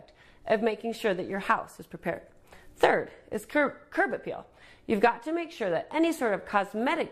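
Underrun with held sample at 3.11, 5.07 and 6.19 s. Each time the output buffer ran dry and the converter held its last value, so the waveform freezes flat for about 2.9, 1.0 and 1.45 ms. The first and last fit 128- and 64-sample shortfalls. Nothing appears lost, as playback resumes where it stopped, so each is a tiny hitch in the sound with only a soft edge on resumption rather than a sharp click.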